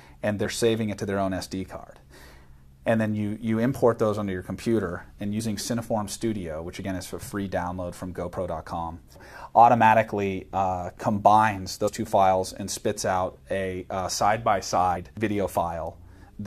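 Compressed frames skipped at 0.44, 5.39, 6.83, 11.87 and 14.96 s: the audio jumps forward by whole 23.2 ms frames, losing about 50 ms, 50 ms, 20 ms, 70 ms and 50 ms.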